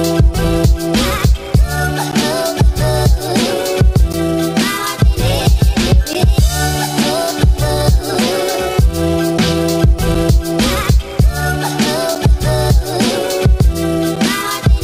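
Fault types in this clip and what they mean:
Gap between stream segments: brief hard-edged dropouts of silence, roughly 5 to 14 ms each, cut into the sound every 2 seconds, near 2.1, 4.1, 6.1, 8.1, 10.1, 12.1 and 14.2 s. Adjacent 2-second segments' timestamps don't meet, so the player pads each gap with silence. Nothing is lost.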